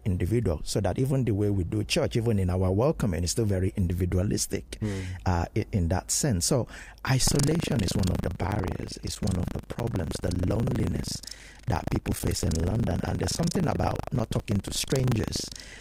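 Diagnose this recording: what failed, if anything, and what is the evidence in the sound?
Buffer tearing in the driver's ring buffer from 7.24 s, after "in that sense so": a 25 Hz robotic buzz as roughly a fifth of each period replays audio about 150 ms stale.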